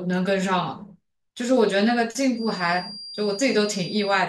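Feedback whistle from 2.29 s to the end: a 4.8 kHz tone about 15 dB below the speech, likely a loudspeaker-microphone loop poised at feedback.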